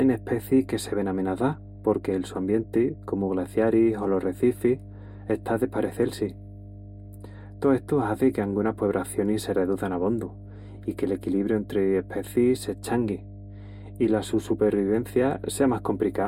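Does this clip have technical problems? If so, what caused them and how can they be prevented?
Yes. Mains hum runs through the whole speech clip: a steady low tone at 50 Hz, sitting roughly 15 dB below the speech. Unlike low-frequency rumble or handling noise, it holds a fixed pitch and never varies with movement or level. It comes from the power line leaking into the signal through a ground loop or a nearby transformer. Prevent it with balanced cabling, a single ground point and distance from power supplies.

Channel delay with comb filtering is also present throughout. One channel arrives a few samples late, a fraction of a tenth of a millisecond, which fits a delay of about four samples. When the channels are summed to mono, the shared sound cancels in a fixed notch near 7 kHz, leaving the top end dull and hollow. Unlike a moving flanger or a low-pass codec, the notch never shifts and the treble doesn't simply stop. 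Prevent it by time-aligning both channels before any mono fold-down.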